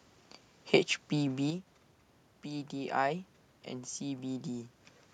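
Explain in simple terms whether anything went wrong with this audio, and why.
Yes, one thing went wrong: from 1.50 to 1.67 s, one stereo channel likely drops out for a moment. With only one side left, the speech suddenly gets noticeably quieter for that brief stretch, then snaps back. The background room noise and the talker shifting position around 1.0 s are just part of the recording.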